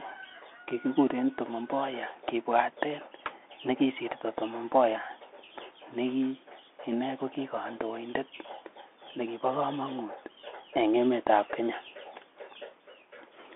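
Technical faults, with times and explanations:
Throughout, Bluetooth CVSD headset codec: the speech travels as one-bit up-or-down steps with adaptive step size, which fits a 64 kbps headset link; the line passes roughly 250 Hz to 3.5 kHz, with nothing above 3.8 kHz, so the voice sounds boxed in, with scratchy s sounds and a granular hiss underneath.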